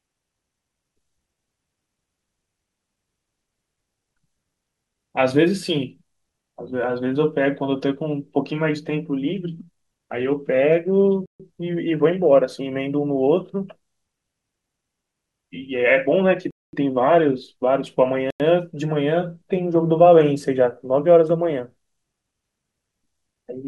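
The speech cuts to silence three times: at 11.26 to 11.40 s for 138 ms, at 16.51 to 16.73 s for 225 ms, and at 18.30 to 18.40 s for 95 ms. These are Bluetooth stalls, likely caused by the headphones' buffer running dry while delayed packets were being resent. Each gap is clean digital silence rather than crackle or smeared, warbling concealment, which separates a stall from codec packet-loss artefacts.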